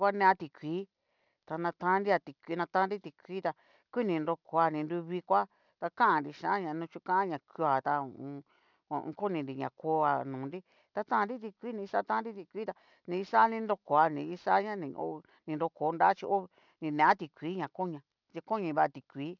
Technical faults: aliasing

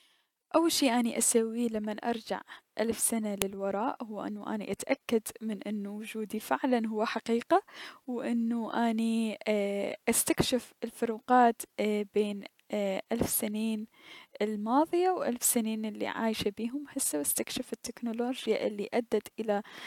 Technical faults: file header played as audio

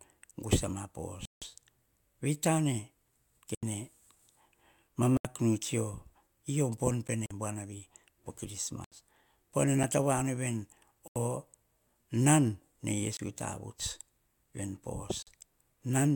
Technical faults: Bluetooth stall; block of digital silence

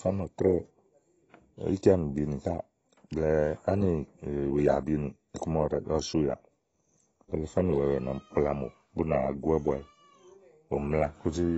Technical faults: AAC compression

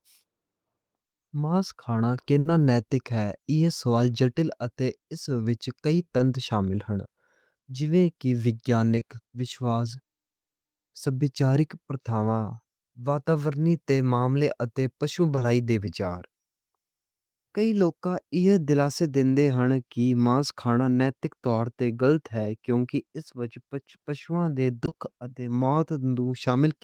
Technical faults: burst of packet loss; short concealed packet loss; repeated packet loss (robotic sound)

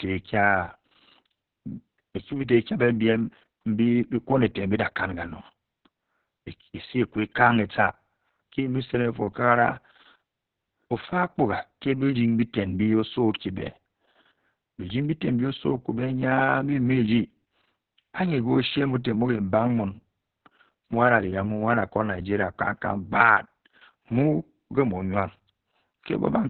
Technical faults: Opus voice compression

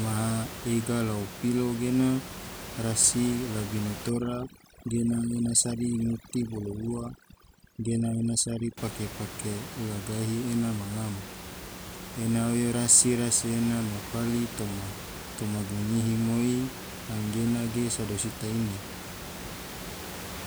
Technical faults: overdone noise removal

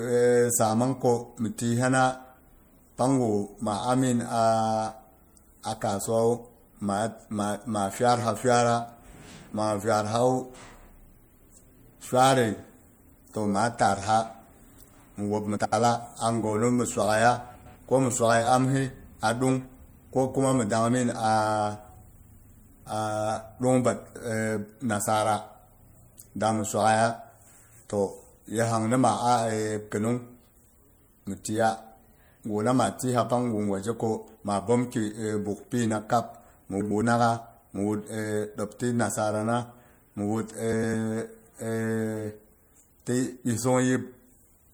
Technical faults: MP3 compression; frames out of order

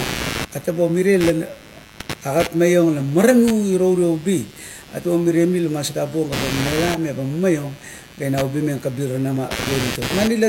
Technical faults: computer activity noise

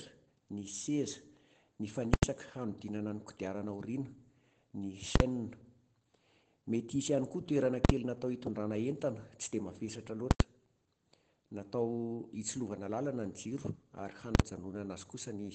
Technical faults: Opus voice compression; invalid numbers at full scale

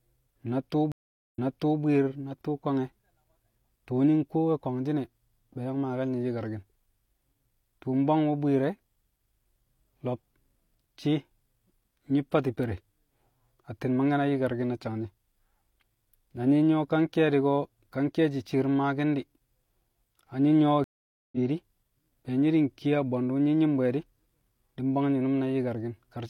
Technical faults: stream reconnect

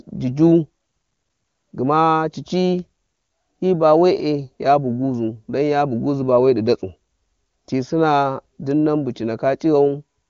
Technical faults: none

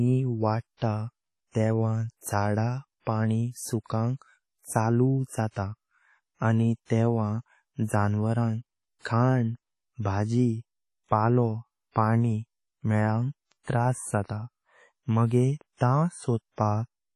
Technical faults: WMA compression; pre-echo

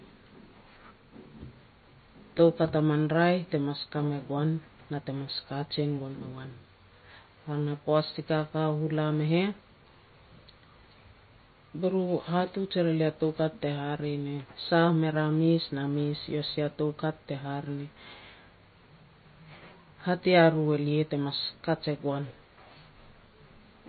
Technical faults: MP3 compression

